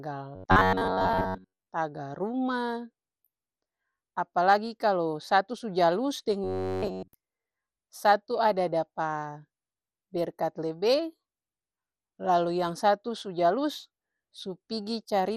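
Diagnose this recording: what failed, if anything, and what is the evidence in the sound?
Throughout the speech, the codec stage shows damage consistent with MP2 compression, likely at a rate of around 64 kbps. The sound is dull, with a granular, gurgling roughness. On a spectrogram, the top edge is a hard ceiling, and the upper sub-bands blink on and off in blocky patches as the bit allocation starves them. The remaining bands look coarse and speckled from heavy quantisation.

From 0.36 to 1.67 s and again from 6.44 to 7.14 s, the speech turns into a rigid, metallic robotic sound from repeated short buffers, a fault likely in the driver or buffer stage. A fixed buzz at 93.8 Hz sits under the voice. That means a repeat period of about 10.7 ms. Most of the audio in those spans is repeated slices while the real audio is skipped. The spectrogram shows evenly spaced horizontal harmonic lines, and the waveform shows identical short cycles.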